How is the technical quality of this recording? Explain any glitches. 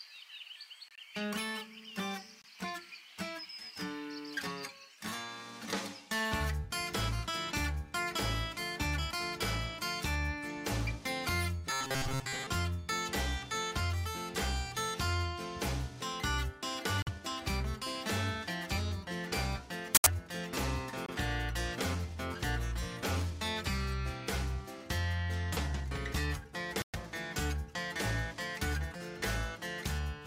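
One glitch stands out. From 11.70 to 12.47 s there is robotic sound from repeated short buffers. The sound turns into a stiff, metallic buzz at 133 Hz. The likely cause is new audio arriving too seldom. A slice of about 7.5 ms keeps looping to fill the gap. Most of the real audio there is skipped.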